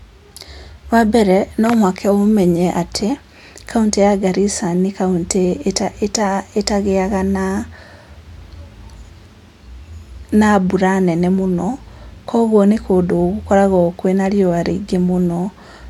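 Nothing goes wrong anywhere in this speech recording; there are no technical faults to point to at any moment.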